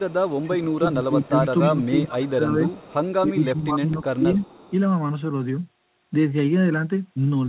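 From 0 to 1.87 s, then 2.71 to 3.13 s and 4.38 to 4.73 s, a faint copy of the speech trails it by 272 ms. This is echo leak, likely from a loudspeaker echo canceller letting through what its microphone picked up. The copy sits about 20 dB below the speech at first, then about 25 and about 30 dB below, and it repeats the audio rather than dropping it.

From 0.49 to 2.73 s and 3.23 to 4.36 s, the speech instead dips by up to about 20 dB in pieces, roughly 1.5 s and 1 s in total. This is speech suppressed in double talk, likely from the canceller turning down both talkers at once. It removes level rather than adding a delayed repeat.

Throughout, the sound has nothing above 4 kHz, consistent with a G.711 mu-law call path at 64 kbps.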